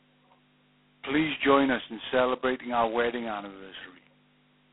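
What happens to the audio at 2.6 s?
At 2.6 s the speech carries G.726 ADPCM damage, which runs through the entire clip rather than starting there. The codec sends only a coarse difference between each sample and an adaptive prediction. The heavy quantisation heard here fits the 16 kbit/s rate, and it leaves a harsh, rasping hiss that rises and falls with the speech level. The sound is also squeezed into a telephone band of 150 Hz to 3.4 kHz, with nothing above 3.8 kHz.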